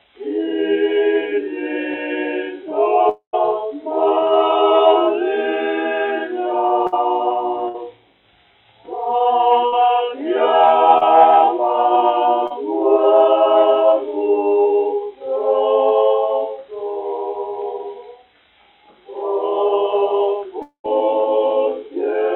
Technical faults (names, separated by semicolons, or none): long network dropout; burst of packet loss; short concealed packet loss